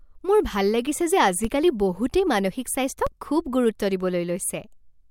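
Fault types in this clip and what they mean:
DC step: the waveform's zero line jumps suddenly, twice here, at 1.45 s and 3.07 s, each by about -16 dBFS. The offset then drains away as a 20 Hz high-pass pulls it back toward zero. Each jump lands as a dull, low thump under the speech, which carries on intact. Unlike a dropout or a digital click, nothing is cut from the sound, and the disturbance is a sudden low thump rather than a gap.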